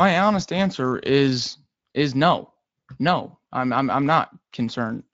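This is a speech clip, and nothing is technically wrong with it.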